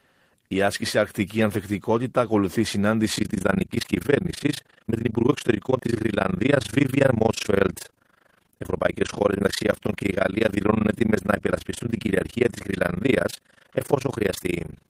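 Overlap-add ripple runs from 3.16 s to the end of the audio at 14.89 s. The sound was split into windowed frames and rejoined with an overlap whose windows fail to add up to a steady gain, so the level dips and recovers once per frame. That pulsing comes around 30 times a second and swings by about 60 dB, deep enough to chop the audio into a harsh, robotic flutter.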